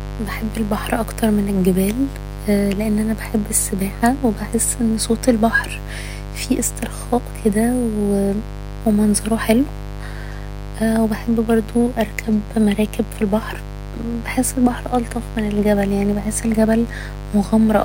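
A steady, raspy mains buzz runs under this speech for its whole length, built on 50 Hz with harmonics stretching into the kilohertz range. It sits fairly loud, roughly ten decibels below the voice. The gritty edge separates it from a smooth, pure hum.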